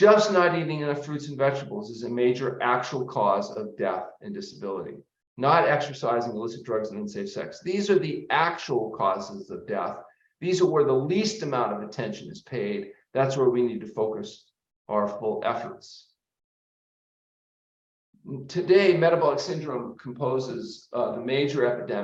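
No technical faults can be heard anywhere in the audio. Nothing in it needs a time stamp or a second listen.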